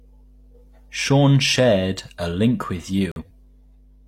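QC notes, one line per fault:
Throughout: mains hum. A ground loop or nearby transformer is coupling the 50 Hz power line into the signal path, so a steady low tone with some low harmonics sits under the speech at a fairly low level, roughly 30 dB below it.
3.12–3.30 s: corrupt frame muted. Damaged compressed frames were rejected by the decoder and the player substituted silence, leaving an abrupt hole of about 0.19 s right after "shared a link with". That fits roughly three frames lost, and timing stays intact.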